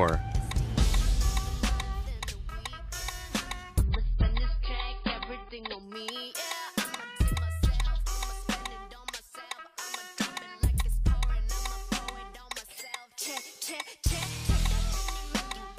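An adaptive stream at a lower bitrate plays from 3.83 to 5.83 s. Falling throughput made the player switch renditions, so treble above 5 kHz suddenly disappears and artefacts thicken, which fits a drop from 128 kbit/s MP3 to about 16 kbit/s. There is no gap at either switch.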